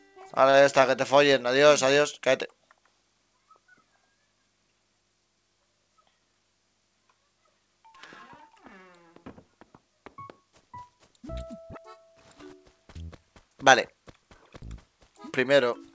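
Right near the start, at about 0.50 s, there's a short stall from a late packet. A packet turned up after it was needed, so the jitter buffer ran dry and the receiver stretched the last bit of sound for about 37 ms until the data arrived, then picked up where it left off. Nothing is lost, but the sound hangs slightly too long with a slight buzz or dip, and everything after it lands about 37 ms later. That all sits inside the call path's band, which stops at 8 kHz.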